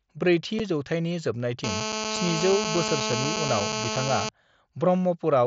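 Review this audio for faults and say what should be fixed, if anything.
At 0.59 s there is unconcealed Bluetooth headset packet loss: a single hole of about 7.5 ms, which fits one lost mSBC frame on the headset-to-phone link. No concealment filled the gap, so the sound drops abruptly and returns just as sharply. Around the gap, the 16 kHz wideband mSBC path can be heard carrying the audio with only light codec graininess. To prevent it, reduce radio interference and distance between headset and phone, and enable packet loss concealment in the receiver.

From 1.64 s to 4.29 s there is a GSM phone buzz: a hard, raspy tone at 217 Hz with a dense stack of harmonics. It sits at about 2 dB below the speech level, so it nearly matches it. A nearby 2G handset in an active call transmits in 217 Hz bursts, and the audio circuitry rectifies those radio pulses into the signal. The buzz is nearly steady through the stretch, which matches a call rather than intermittent data traffic. 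To prevent it, keep GSM phones away from the recording chain or switch them to airplane mode, and use shielded cabling with RF filtering on audio inputs.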